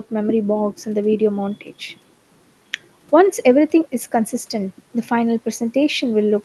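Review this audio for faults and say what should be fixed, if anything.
I found no faults in this speech audio, so nothing needs to be fixed.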